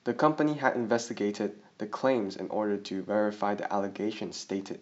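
No technical faults can be heard anywhere in the speech, so there is nothing to describe in time order.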